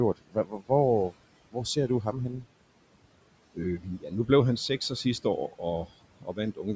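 Noise suppressor artifacts run through the whole clip. The suppressor pulls the steady room noise down by about 18 dB frame by frame, so the background sinks in the gaps between phrases and comes back up underneath the speech, giving the noise floor a pumping, uneven quality.

There's also speech cut by the noise suppressor three times: 0.16 to 0.7 s, 3.8 to 4.29 s and 6.2 to 6.38 s. Each time it mistook quiet parts of the speech for noise and turned them down with the background, by up to about 19, 12 and 16 dB. That adds up to roughly a third of a second in the first stretch and about a sixth in each of the others, and those bits sound swallowed and faint.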